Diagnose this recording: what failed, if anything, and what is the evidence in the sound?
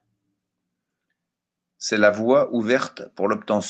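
No faults detected in this recording.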